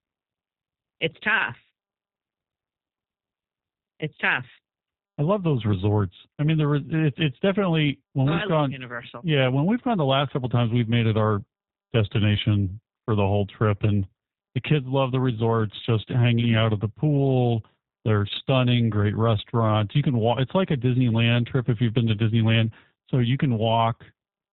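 From start to end, the speech carries plainly audible G.729 codec damage, with the rough, buzzy, slightly synthetic character that points to the G.729A variant at around 8 kbit/s. The codec rebuilds each 10 ms frame from a vocal-tract filter, a pitch predictor and a handful of pulses, so fine detail is lost. On a spectrogram, energy stops dead near 4 kHz and harmonics look smeared.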